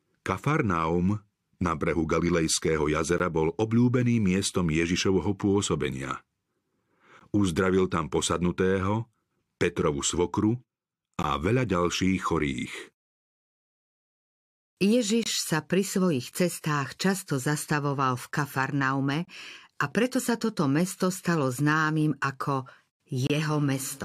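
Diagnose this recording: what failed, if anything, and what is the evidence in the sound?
Gap between stream segments at 3.18, 7.19, 11.23 (before "veľa ďalších chorých"), 15.23–15.26, 19.25–19.28 and 23.27–23.30 s: the streaming playback stage leaves 14–28 ms silent holes every 4 s, where segment timestamps fail to meet.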